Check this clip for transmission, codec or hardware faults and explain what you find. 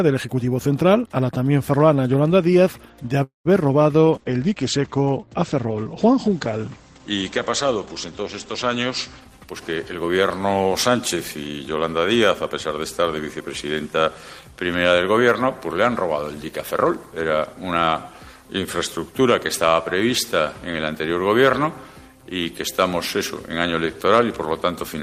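Three transmission faults show up: a short stall, a long stretch of reduced encoding quality, and a brief spell of accelerated playback near its end.

From 3.23 to 3.47 s there is a call audio freeze. Packets were likely held up in transit, so the jitter buffer ran dry and the receiver had to invent 0.22 s of sound by extending what it last had. That fill fades into about 140 ms of silence. When the audio resumes it picks up where it stopped, so nothing is lost, but everything after it now runs 218 ms later.

From 4.04 to 10.31 s there is a call bitrate drop. The bandwidth estimate fell, and the encoder was pushed from 32 kbps down to 12 kbps, holding at the lowest rate for about 4.7 s. With so few bits, the audio is quantised much more coarsely, and the coded bandwidth shrinks from 20 kHz to 8 kHz. The sound turns muffled and somewhat rough and watery, losing its top end until the rate climbs back.

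From 9.20 to 10.19 s, overlapping the tail of the bitrate drop, there is a jitter buffer speed-up. Audio had accumulated in the buffer beyond its target, so the receiver trimmed it by repeatedly cutting out short pitch-period-length pieces, removing roughly 0.2 s in total. Playback runs at 122% speed without any change in pitch, so this second sounds noticeably hurried.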